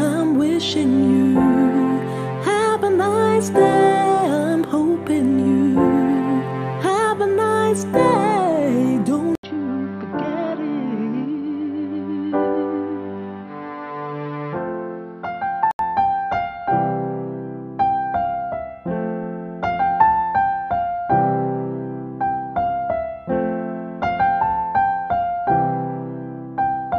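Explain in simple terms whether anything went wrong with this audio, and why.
At 9.35 s there's a brief gap, then the sound turns dull and quieter, with a different background noise, until 15.79 s, likely an input switched to a poorer device.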